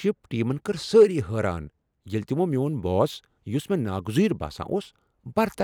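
Nothing in this bit of speech jumps out as a technical fault, so there's nothing to pin to any particular moment.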